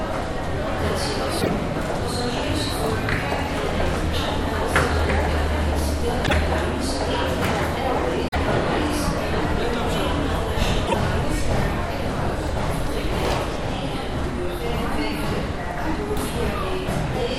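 Damaged data in a compressed stream breaks into this everyday-sound recording four times, at 1.38, 6.23, 8.27 and 10.84 s, each burst lasting about a tenth of a second. At those points the decoder misreads or rejects the corrupted frames, then loses frame sync and scans forward for the next good header before normal sound resumes.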